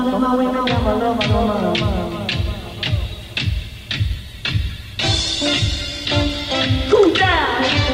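A call bitrate drop runs from 4.12 to 6.53 s: the encoder was pushed from a generous rate down to a very lean one, which fits a fall from around 96 to 16 kbps. For about 2.35 s, coarser coding and lost high frequencies leave the sound muffled and watery.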